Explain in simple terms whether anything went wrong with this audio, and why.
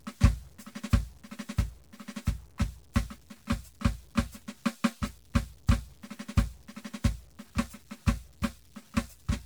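Gritty, grainy distortion clings to the music for the whole clip and roughens the quiet passages most. That is low bit depth without dither, likely from the sound being cut down to very few levels.

The music also sounds swirly, smeared and hollow throughout, with blurred attacks. That is generation loss, likely from being compressed and decompressed as MP3 about ten times over.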